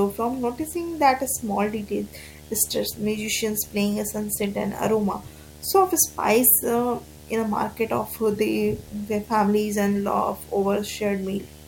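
A video or display buzz runs through the whole speech clip: a monitor or video cable is leaking its field-rate signal into the audio path. The result is a steady 75 Hz buzz with hash above it, sitting roughly 20 dB below the speech.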